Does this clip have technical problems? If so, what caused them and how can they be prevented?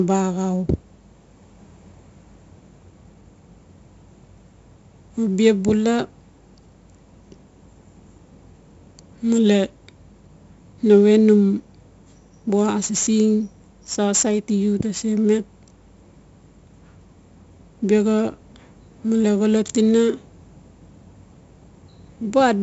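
Yes. Throughout the speech there is 4-bit ADPCM compression damage, and it is heavy. Each sample is coded as a coarse 4-bit step from a predicted value. The quantisation error rides along with the signal level, so louder syllables carry a gritty hiss, and sharp consonant onsets distort where the adaptive step size lags behind. Nothing is present above 7.7 kHz. Together with the 64 kbps rate, this fits a 16 kHz sample rate and explains the dull top end. To prevent it, record and deliver the speech as PCM at 44.1 or 48 kHz, or use a modern perceptual codec at a sufficient bitrate instead of ADPCM.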